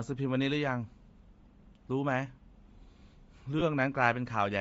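From start to finish the speech carries a breathy, grainy fizz in its upper range, where the fine detail has been replaced by a hiss-like texture rather than simply cut off. This points to Bluetooth LC3 compression, likely at a low rate in the region of 32 kbps. The encoder drops much of the high spectrum and fills the gaps with shaped noise. Unlike a plain low-pass or MP3 swirl, the top end is still present but sounds synthetic and sandy.

At 3.59 to 3.62 s there is a brief smeared blip where the speech turns to a noisy wash. These are lost LE Audio frames, and the gap fits about two 10 ms frames. The decoder covers the hole by repeating the last spectrum with randomised phase. Because the loss is so short, it never fades toward silence, and what you hear is a fleeting hiss-like blur rather than a click or a hard mute.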